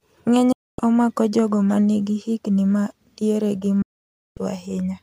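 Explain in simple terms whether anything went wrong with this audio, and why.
Two digital broadcast dropouts cut into this speech. From 0.52 to 0.79 s the sound drops to silence, then returns at "omako jogo manigi higni". After "higni ma diere gi", a longer gap runs from 3.82 to 4.38 s. The receiver lost a clean signal and muted. Whatever was sent during those gaps is gone.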